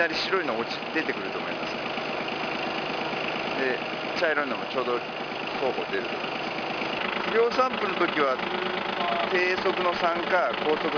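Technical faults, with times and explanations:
Throughout: aliasing. The clip was resampled to a lower rate with no filter first, which points to a drop from 44.1 kHz to 11 kHz. Anything above the new limit of 5.5 kHz was not removed. It folds back below that limit at wrong, unrelated pitches. These false tones sit around 15 dB under the wanted sound. High content turns gritty and metallic. The spectrum runs hard up to the 5.5 kHz edge.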